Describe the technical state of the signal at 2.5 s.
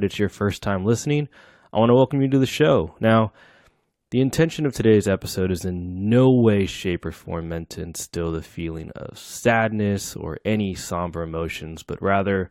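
At 2.5 s the speech signal is intact, with no audible technical fault at that moment.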